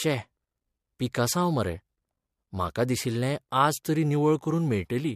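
No technical faults are audible.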